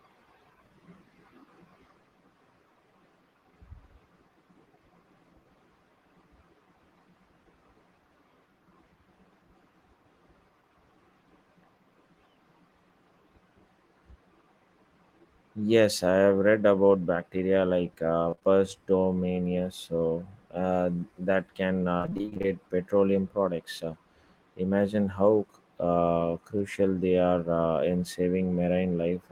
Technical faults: short concealed packet loss; repeated packet loss (robotic sound)

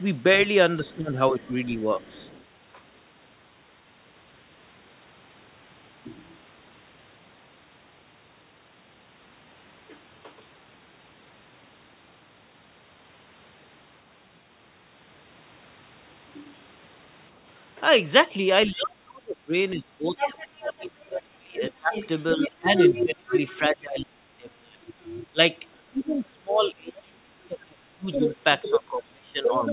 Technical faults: other side's voice leaking through; speech suppressed in double talk

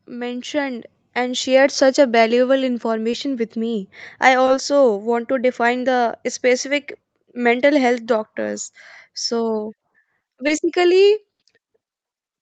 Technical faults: automatic gain rising; short concealed packet loss; burst of packet loss

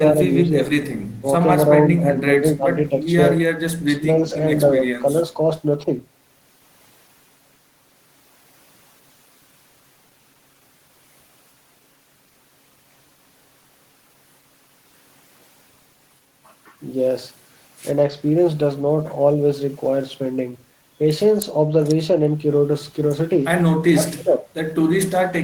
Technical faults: speech suppressed in double talk; echo leak

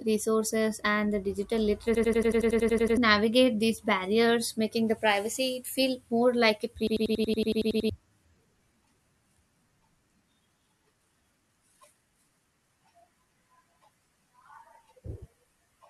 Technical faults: system hang loop

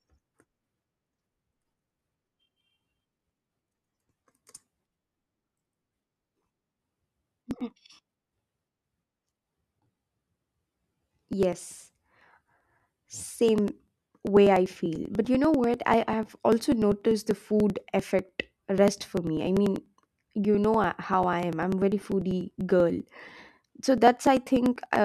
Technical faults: periodic USB or driver dropouts

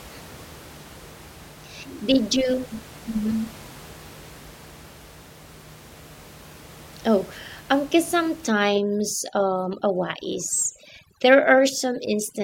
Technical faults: overdone noise removal

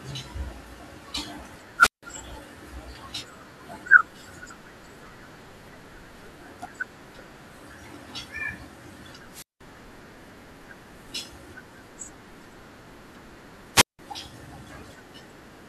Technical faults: wireless microphone squelch dropout

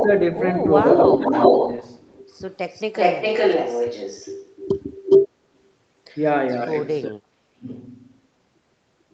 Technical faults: echo leak; speech suppressed in double talk

